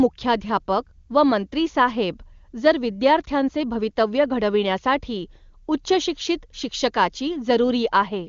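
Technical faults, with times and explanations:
No faults found; the speech carries the band limit of the AMR wideband (HD Voice) codec, with nothing above about 7.3 kHz, and its detail points to the codec's highest rate.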